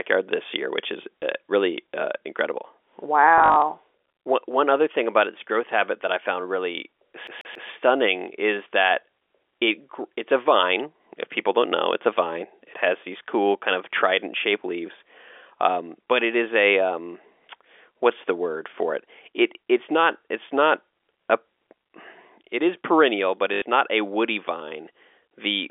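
Speech heard over a telephone line, limited to roughly 300 Hz to 3.5 kHz, is broken by brief robotic stutters and one skipping loop. A small blip at 1.21 s, after "this year which is" and before "uh really uh incredible", is packet loss with the last packet repeated. About 20 ms of audio, which fits a single packet, went missing, and the receiver replayed the previous chunk. The same fault returns as a rough buzzing stutter from 3.38 to 3.62 s, with about 140 ms replaced in runs of up to 40 ms, and again from 23.54 to 23.62 s, where 80 ms is filled with repeats between "it is perennial but" and "not a woody vine". From 7.27 to 7.69 s, right after "that I found really", the audio turns into a fast, even stutter. A 139 ms fragment repeats three times with a tiny mute at each jump. This is a CD stuck on one turn: a scratch throws the laser back one track at the same point on every rotation, so the same slice of sound repeats until it breaks free.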